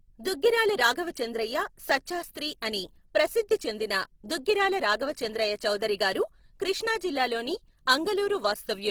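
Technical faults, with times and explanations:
Throughout, Opus compression: the speech sounds plainly grainy and rough, with bands filled in by noise rather than dropped, likely a low-bitrate CELT-mode encode around 16 kbps.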